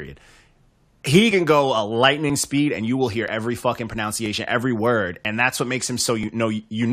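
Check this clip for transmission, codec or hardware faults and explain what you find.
One transmission fault recurs through the speech. Overlap between stream segments at 1.31, 2.30, 3.28, 4.26, 5.25 and 6.23 s: overlapping segment timestamps, roughly one second apart, make the player discard a few milliseconds of real audio, leaving tiny skips.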